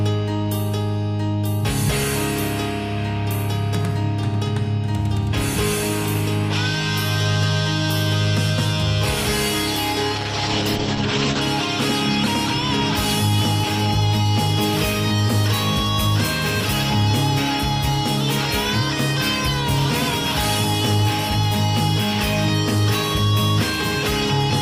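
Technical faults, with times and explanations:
10.16 to 11.47 s, call bitrate drop: audio turns coarse and muffled, with highs cut above 8 kHz, which fits the encoder being starved to around 10 kbps.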